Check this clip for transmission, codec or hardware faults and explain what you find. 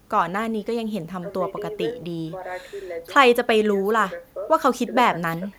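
Nothing stood out on listening to this recording of speech.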